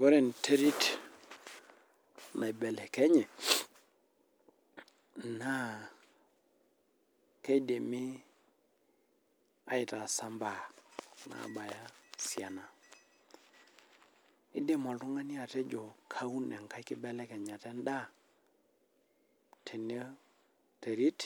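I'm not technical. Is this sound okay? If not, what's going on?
Yes, this one's fine, and there's nothing here that sounds broken or glitchy to worry about.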